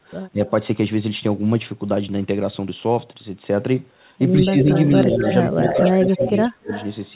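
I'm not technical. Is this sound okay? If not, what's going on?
No. There are two problems, both typical of a call where one person is on a loudspeaker.

Speech suppressed in double talk: the voice briefly dips at 0.3 s, sinks again from 4.32 to 4.69 s, and almost vanishes from 5.51 to 6.71 s. Both sides were likely talking at once, and the echo control turned everything down.

Echo leak: from 4.61 s to the end, a second copy of the voice trails about 0.19 s behind, nearly as loud as the original. It is likely loudspeaker sound that the other side's microphone picked up and sent back. Unlike room reverberation, it is a distinct repeat, not a smooth tail.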